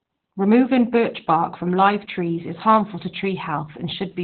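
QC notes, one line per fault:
Throughout: Opus voice compression, heavy. Nothing above about 4.4 kHz, so the speech sounds narrowband, muffled and slightly hoarse and robotic. The coarse excitation coding is consistent with SILK-mode Opus at a very low bitrate, around 8 kbps.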